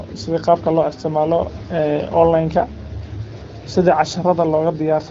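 No technical faults can be heard in this speech, which comes through the AMR wideband (HD Voice) codec at 12.65 kbit/s.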